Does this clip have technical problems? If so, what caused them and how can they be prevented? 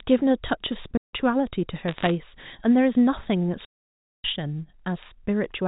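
Yes. Digital wireless dropouts cut the speech at 0.97 to 1.14 s and at 3.65 to 4.24 s, leaving clean holes of near silence about 0.16 s and 0.59 s long. The receiver muted after losing too much data, with no noise burst. Preventing them means keeping line of sight, shortening the range, and moving off congested channels.

Bit errors on a digital phone line add crackle from 1.88 to 2.10 s. With roughly one bit in 150 corrupted, flipped sign or high-order bits turn single samples into sharp ticks. The underlying G.711 telephone band comes through as expected. Preventing them means repairing noisy line sections or using a link with error correction.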